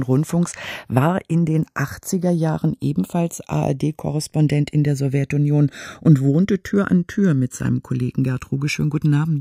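Throughout the speech, the channels drift apart: the two sides run on clocks that disagree by around 100 ppm, so the offset between them slides steadily, to under a millisecond by the end. Heard summed to mono, sweeping comb notches produce a slow flanging.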